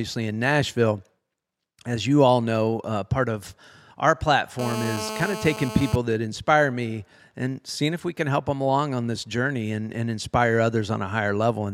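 From 4.59 to 5.96 s, after "uh part of our" and until "that inspire me and", there's GSM phone buzz: a 2G handset in a call, pulsing at about 217 Hz, rectified into a raspy, harmonic-heavy drone about 9 dB under the speech.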